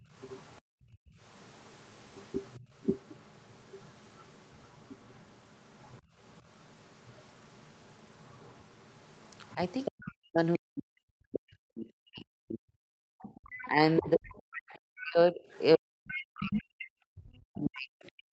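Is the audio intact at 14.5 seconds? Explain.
No. At 14.5 seconds the main speech is being pushed down hard. From 9.55 s to the end of the clip it dips, thins and breaks into pieces, at its worst falling by something like 40 dB. This is speech suppressed in double talk. The likely cause is an echo canceller that heard both sides at once, could not tell its own talker from the loudspeaker echo, and attenuated everything.

At the same moment a second voice is audible underneath, from 13.22 s to 16.87 s, well below the main talker, roughly 15 dB down. This is the other side's voice leaking through. The far end's audio was played from the talker's loudspeaker and picked up again by the microphone, and the echo canceller is likely not removing all of it. The result is a faint intruding voice running alongside the suppressed speech.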